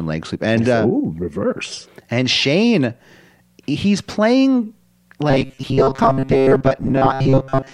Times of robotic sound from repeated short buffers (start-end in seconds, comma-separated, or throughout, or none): 5.30-7.74